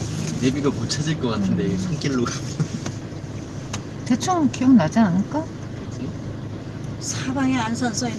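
No technical faults are audible.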